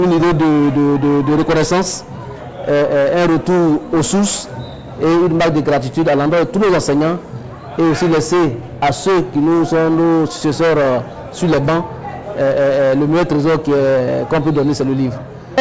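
No technical faults are audible.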